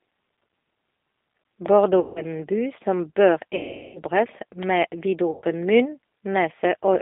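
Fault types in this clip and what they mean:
G.729 codec: An 8 kbit/s model-based speech codec rebuilds the voice. The band spans 250 Hz to 3.6 kHz. It sounds plainly rough and synthetic.
VoIP packet loss concealed by the speech codec: Missing audio is filled with a stretched, fading buzzy tone or coloured noise. Gaps last 160, 400 and 100 ms, the longest after "en by som bør".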